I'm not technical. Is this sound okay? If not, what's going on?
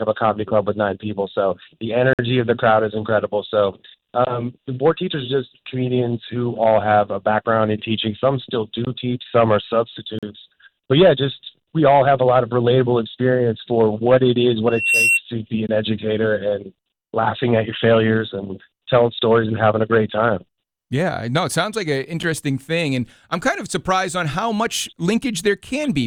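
No. There are two problems.

The first is a gap between stream segments. The sound stops dead for a moment with sharp edges, at 2.13 to 2.19 s, 10.19 to 10.23 s, and very briefly at 22.23 s. The pauses last about 54, 39 and 7 thousandths of a second. The spacing fits audio delivered in 4-second chunks that don't line up exactly, so the player fills the space with silence. Unlike a dropout, nothing is missing. The sound just resumes slightly late.

The second is a loudspeaker feedback squeal from 14.67 to 15.21 s. A microphone picked up its own loudspeaker, and one pitch, a high whistle near 2.7 kHz, kept feeding on itself. It swells over roughly a third of a second until it is louder than the main sound. That gradual growth sets it apart from a steady background whine, which would stay at the same level throughout.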